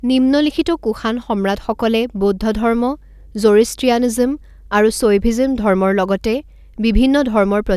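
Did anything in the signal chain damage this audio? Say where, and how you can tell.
No, the speech comes through the chain with no audible damage at any stage, from the wiring through to playback.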